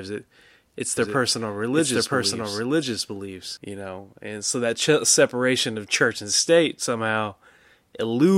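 From 0.97 s to 3.57 s, just after "it it's", a doubled audio track appears: a second full-band copy of the speech runs roughly one second behind at about equal level, dry and uncoloured, starting and stopping abruptly. It likely comes from a slower second capture path.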